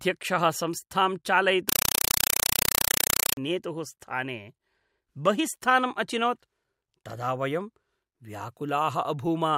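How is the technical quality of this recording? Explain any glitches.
A compressed stream played as audio breaks into the recording from 1.69 to 3.37 s. A Dolby Digital (AC-3) bitstream, consistent with 192 kbps, reached the output as if it were ordinary samples instead of being decoded. Each frame lands as a 4.0 ms burst of noise followed by silent padding, repeating 31.25 times a second. The speech is replaced by very loud, rapidly chattering static.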